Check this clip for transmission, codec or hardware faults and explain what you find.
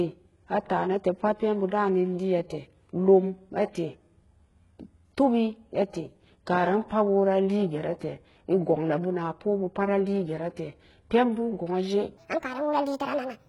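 Two faults stand out: heavy codec damage across the whole clip, and a speeded-up stretch at the end.

Throughout the speech, sibilants sound gritty and metallic, and the treble is bright but artificial. This is likely HE-AAC compression at a very low bitrate, around 12 kbps. Spectral band replication rebuilds the upper range from copied lower bands, so those harmonics no longer match the real signal.

From 12.17 s to the end, the voice turns hurried and high, about ten semitones up. This is a section at the wrong speed, running 1.63 times too fast, likely from playback against a mismatched clock, so pitch and tempo rise together.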